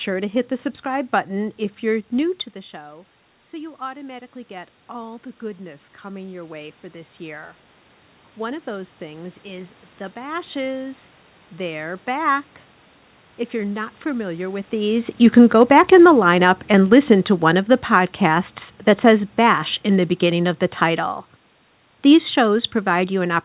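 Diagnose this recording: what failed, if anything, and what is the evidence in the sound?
Automatic gain rising, in the call processing stage: around 2.0 s the talker moves back and the input drops by about 17 dB. The AGC then raises its gain by about 10 dB from 2.53 to 7.56 s, after "if you're new to," so the voice and the room noise swell together. On the waveform the envelope ramps up steadily. On the spectrogram, which stops at 4 kHz as a narrowband call path would, the noise floor brightens along with the speech.

Automatic gain falling, in the same stage: around 14.5 s the talker comes closer. From 14.79 to 18.53 s, between "you're not familiar with" and "that says," the sound starts loud and then sinks by about 6 dB, with its background sinking too. The waveform envelope tapers, and the spectrogram's noise floor darkens in step with the speech.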